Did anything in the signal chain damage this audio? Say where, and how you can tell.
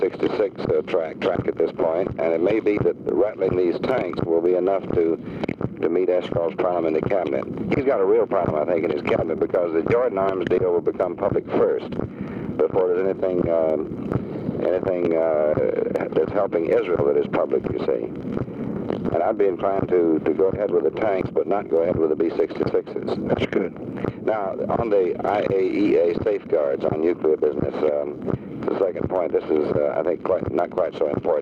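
Yes. Gain pumping runs through the whole clip: the gain swings by something like 15 dB, and loud and quiet passages sit unnaturally close in level, so the sound feels squashed. The damage is at the input stage, likely from input gain set far too high with a fast limiter or compressor clamping it down on each peak and releasing in between.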